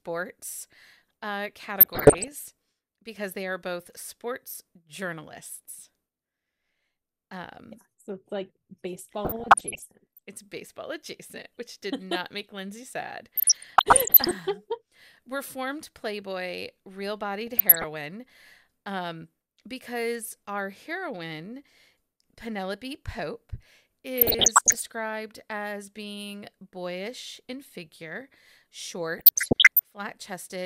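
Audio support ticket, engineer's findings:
DAB burbling in the speech at 1.80–2.28, 9.25–10.19, 13.35–14.31, 17.42–17.84, 24.17–24.82 and 29.17–29.84 s. Short noise blips and level jumps in single sub-bands. Weak DAB reception. Residual bit errors, about 0.5 to 1.5 percent, corrupt MP2 samples and scale factors. Single sub-bands jump in level for up to a frame.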